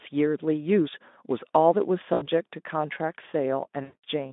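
At 2.13 s there's VoIP packet loss concealed by the speech codec. About 80 ms of audio never arrived, so the decoder kept extrapolating from its last pitch and filter and turned the gain down each frame. You hear a brief smear that sags until about 2.28 s. It happens again at 3.83 s with a 200 ms gap, which fits 20 ms frames. That one fades longer and stays weak and distorted through to about 4.04 s, over the narrowband, lightly coloured Speex sound.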